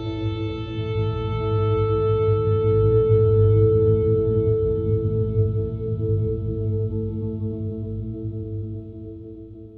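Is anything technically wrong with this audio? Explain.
Yes, there's a doubled audio track running the whole way through. A second full-band copy of the sound trails the original by roughly a fifth of a second, at about the same level, so every attack gets a crisp, slap-like repeat. It has no decay or room colour, which rules out a real reflection. The likely cause is the same signal being picked up twice, with one route running slower, or an edit leaving two copies stacked out of step.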